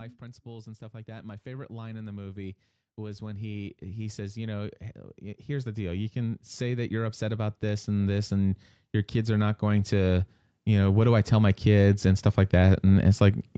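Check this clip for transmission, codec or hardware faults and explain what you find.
The clip has one recurring fault: automatic gain rising, heard three times. The first rise runs from 0.2 to 4.83 s and adds about 10 dB. The second runs from 5.45 to 8.6 s and adds about 7 dB. The third runs from 9.12 to 13.5 s and adds about 9 dB. Each time, the gain control judges the input too quiet and raises its gain gradually. Speech and background noise swell together over several seconds. The call path's top end stops near 8 kHz.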